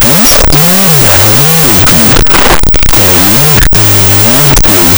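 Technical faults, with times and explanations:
Throughout, wrong sample width: the speech sounds buried in loud, harsh noise, at half speed and an octave low. The 16-bit samples appear to be read as unsigned 8-bit values. Each sample splits into two, and the low bytes become noise.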